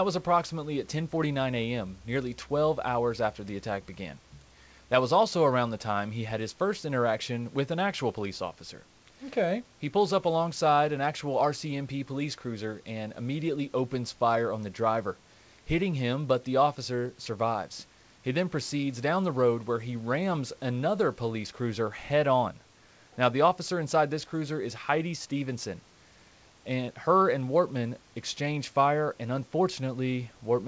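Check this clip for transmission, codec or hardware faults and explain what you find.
No transmission, codec or hardware faults turn up: the speech carries nothing above 8 kHz, which fits a wideband call codec such as G.722, and the room noise sits about 36 dB below it.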